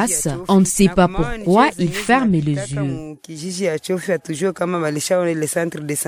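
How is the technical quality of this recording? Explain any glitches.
One glitch stands out, a corrupt frame decoded at 3.16 to 3.21 s. A few compressed frames arrived with damaged bits, and the decoder played them anyway. Misread gains and codes put energy at wrong frequencies for about 50 ms, heard as a brief, fairly quiet chirp or noise blip peaking around -40 dBFS.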